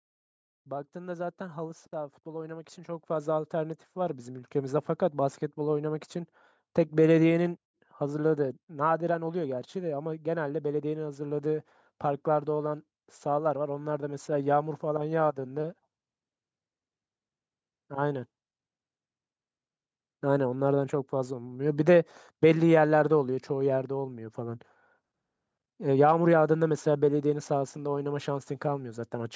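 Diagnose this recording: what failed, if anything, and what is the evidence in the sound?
The failure is automatic gain rising in the call processing stage. From 0.92 s to 4.83 s the speech and the background noise swell together by about 12 dB, since the gain control judged the input too quiet and raised its gain gradually rather than in a single step.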